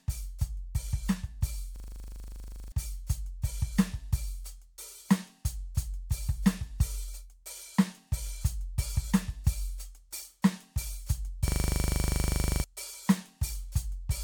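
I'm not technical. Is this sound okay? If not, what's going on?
No. The music freezes twice, from 1.76 to 2.72 s and from 11.48 to 12.64 s. Each time, the same tiny 40 ms scrap of sound repeats about 25 times per second. That gives a harsh, rattling buzz instead of music. This is a system hang loop. The computer stalled, but the sound hardware kept replaying the last bit of audio it held. When playback recovers, roughly a second of the music is missing each time.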